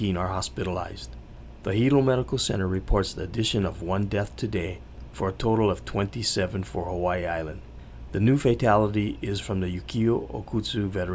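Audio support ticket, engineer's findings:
No audible faults found on listening; nothing to attribute to any component in the capture, transport or playback path.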